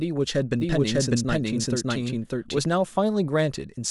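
From 0.6 s to 2.58 s the speech is doubled. A second, full-band copy of the same audio runs about 0.7 s behind the original, at roughly equal loudness. It carries no decay or room colour, so it sounds like a separate track rather than an echo. It cuts in and out abruptly at those times. The likely cause is a second capture path with extra latency, or an edit leaving two misaligned copies.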